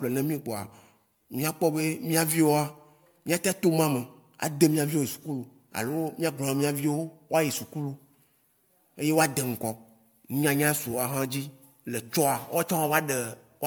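From start to finish the speech carries generation loss: a swirly, hollow quality with smeared consonant attacks and a grainy noise floor, heavier than a single lossy pass would leave. The likely cause is repeated MP3 decoding and re-encoding, around seven passes, at a rate that fits 128 kbit/s. Each pass re-quantises on a shifted frame grid, so spectral holes and noise accumulate, even though content still reaches about 20.1 kHz.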